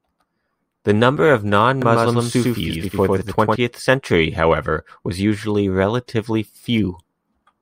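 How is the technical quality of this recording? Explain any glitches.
There's one glitch worth flagging. From 1.82 to 3.56 s, right after "number of" and until just before "century however was usually", there's a doubled audio track. A second full-band copy of the speech runs roughly a tenth of a second behind at about the same level, so it sounds like a dry slapback with no room tail, switching in and out abruptly. It's likely a slower second capture path or an edit leaving two copies overlapped.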